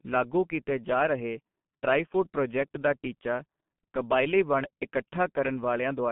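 Throughout the speech, G.723.1 codec damage is heavy. Nothing passes above 3.4 kHz or below 150 Hz. Its slow voice-model updates blur consonants and leave a hoarse, muffled quality. Band-limiting alone wouldn't cause that roughness, which points to roughly 6 kbit/s coding.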